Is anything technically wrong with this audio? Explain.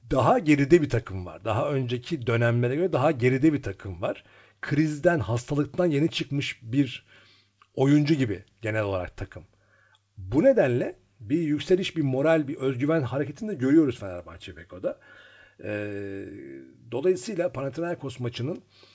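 No, nothing is technically wrong with this speech clip. It has come through a WebRTC call path, and the absence of anything above 8 kHz fits a wideband call codec such as G.722.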